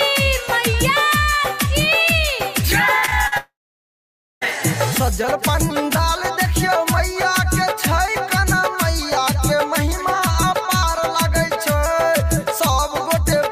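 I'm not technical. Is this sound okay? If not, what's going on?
No. From 2.99 to 3.34 s there is repeated packet loss (robotic sound): four tiny holes, the longest about 41 ms, each patched by stretching the previous sound, so it turns choppy. Unlike a dropout, the sound keeps returning between holes.

Right after, from 3.38 to 4.43 s, the sound briefly trails on as a fading buzz and then goes silent for about 0.9 s before resuming with that part missing. This is likely a long network dropout. Unlike the choppy stretch, nothing comes through at all during it.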